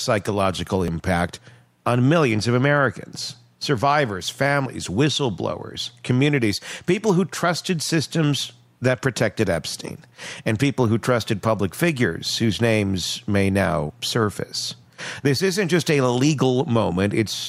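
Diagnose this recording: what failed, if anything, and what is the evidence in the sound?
At 0.88 s there is a sudden jump in the sound. No gap of silence separates the two sides. About 20 ms of audio is missing. This is likely a dropped buffer (overrun) at the driver or buffer stage: the hardware overwrote samples before the program collected them.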